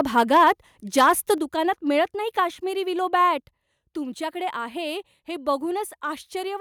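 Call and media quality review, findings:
Microphone overload, 0.00–0.51 s and 0.98–1.33 s, the latter just before "दुकानात मिळत नाही". Harsh crackle on the loudest peaks. Likely mic input gain set too high. Peaks exceed converter full scale by about 2 dB, then about 5 dB. A few percent of samples are flattened.

Microphone volume stepped down at 0.37 s and 1.38 s. Sudden level drop in the speech and background, by about 2 dB, then about 5 dB. The first falls within a clipped stretch, the second comes right after one. Likely the call software's automatic gain control reacting to the overload.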